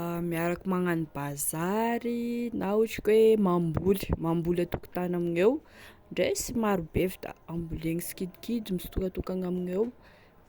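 No technical faults can be heard anywhere in this speech.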